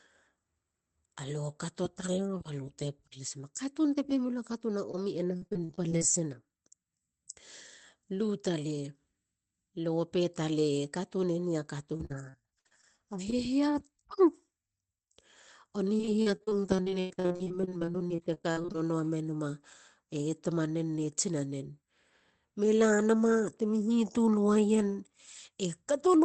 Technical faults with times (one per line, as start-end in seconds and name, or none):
4.91-4.95 short concealed packet loss
5.37-6.03 repeated packet loss (robotic sound)
11.97-12.85 repeated packet loss (robotic sound)
13.30-13.34 short concealed packet loss
15.98-18.76 repeated packet loss (robotic sound)